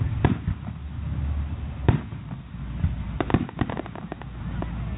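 No technical faults can be heard; the audio has the narrowband character of an ordinary call path, with nothing above 4 kHz, which fits G.711 A-law telephone coding at 64 kbps.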